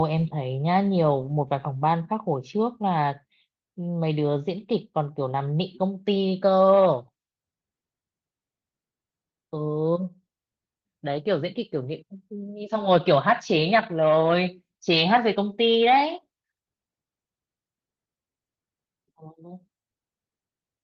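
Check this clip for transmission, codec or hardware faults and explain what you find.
No faults turn up anywhere in this speech recording. The Opus voice compression keeps the full audio band with only a light coding texture, which fits hybrid-mode Opus at around 20 kbps.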